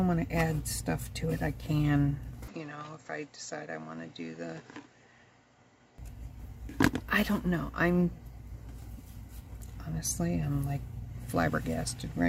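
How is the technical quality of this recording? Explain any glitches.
One glitch affects the technical quality. From 2.48 to 5.98 s, the input likely switched to a poorer device, cutting everything above 7.6 kHz, so the sound turns dull, drops about 5 dB, and gains faint new background noise, all without a gap.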